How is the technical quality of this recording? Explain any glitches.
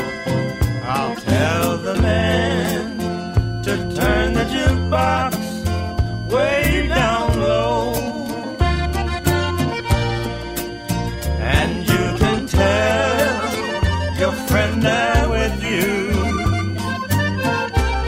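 The recording has one technical fault, and it runs from start to finish: a switching supply whistle. A switching power supply is cycling in an audible burst mode, or beating against a second supply, so its switching energy lands inside the hearing range and gets into the audio path. The result is a thin high whistle around 1.5 kHz, wandering between roughly 1.47 and 1.68 kHz as the supply's load shifts. It sits perhaps 20 dB under the main sound.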